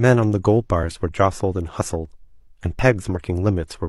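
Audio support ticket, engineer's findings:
Audio missing between chunks: abrupt skip at 2.79 s, roughly 20 ms of speech gone, both sides butted together with no gap. Likely a capture or processing stage working in 1.0 s chunks dropping samples at a chunk handover.

Compressed frames skipped: jump ahead, 3.12–3.18 s. About 50 ms of speech jumped over, consistent with one dropped frame of about 46 ms. Decoder missing a frame or discarding it as corrupt.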